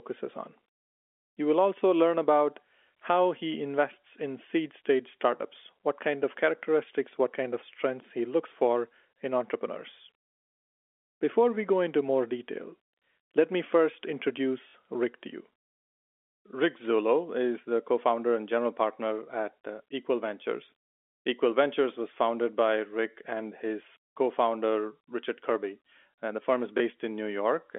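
At 14.68 s a brief robotic stutter buzzes for about 60 ms, and at 26.78 s a single 20 ms blip follows. This is packet loss with last packet repeated. The receiver replayed earlier audio to fill gaps, which fits three lost 20 ms packets, then one.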